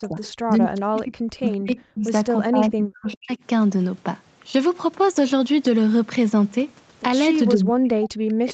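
From 0.0 to 2.13 s the speech dips by up to about 40 dB, over roughly 1.5 s in total. This is likely speech suppressed in double talk, where the canceller turned down the near talker along with the echo. Inside that stretch, at 0.02 to 0.29 s, 1.48 to 1.57 s and 2.07 to 2.11 s, short scraps of a second voice come back 401 ms late. They sit about 25 dB below the speech, and about 20 dB below at 2.07 s. These are likely echo leak from a loudspeaker side. The same dipping returns from 2.48 to 3.31 s, over roughly 0.7 s, with one more echo scrap at 3.12 to 3.17 s. From 7.55 s to the end the speech drops again, by up to about 40 dB.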